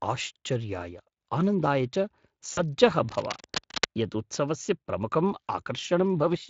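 From 2.53 to 2.62 s, just after "आनन्दाय च", the sound turns briefly buzzy or noisy and fades. This is VoIP packet loss concealed by the speech codec, which stretched its last sound over roughly 40 ms of missing audio.

From 3.09 to 3.85 s, ending just before "यत् उत्सवस्य प्रमुखं", uneven scratching bursts sit only slightly below the speech. This cable scratch noise likely comes from a worn connector being moved.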